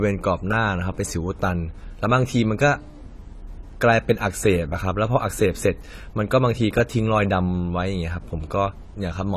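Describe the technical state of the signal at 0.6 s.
At 0.6 s the speech carries plainly audible AAC compression damage that runs through the whole clip, likely from AAC-LC at a low bitrate near 32 kbps. The quantised frequency lines leave the speech dull and smeared, and a spectrogram shows a hard ceiling at 14 kHz.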